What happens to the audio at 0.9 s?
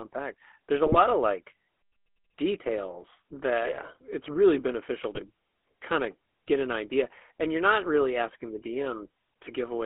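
From 0.86 to 0.99 s, GSM bit errors corrupt the decoder's filter, pitch and gain values across what sounds like about six frames, so the sound breaks into squawks, pops and a gargling burst. Underneath, the GSM full-rate codec, consistent with 13 kbps coding over a 250 Hz to 3.5 kHz band, adds its buzzy, gravelly roughness.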